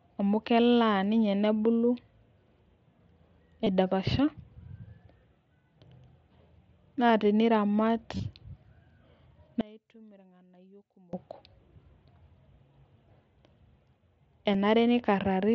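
Recorded speech carried over a Bluetooth headset link, whose mSBC wideband codec leaves a light graininess, has concealed Bluetooth headset packet loss at 3.64–3.67 s and 8.17–8.20 s (each about 22 ms) and at 14.54 s (about 7.5 ms). Unlike a true dropout, these gaps are not silent. The receiver fills them by repeating a recent stretch of waveform, so the two longer ones are only a brief buzzy smear and the single short one is nearly hidden. From 9.61 to 11.13 s the level falls by about 28 dB, and only a faint residue of the speech remains rather than silence. That points to one stereo channel being inverted, likely cancelling against the other when summed to mono.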